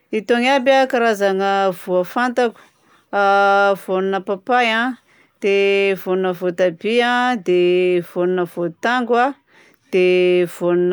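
No technical faults can be heard in this recording.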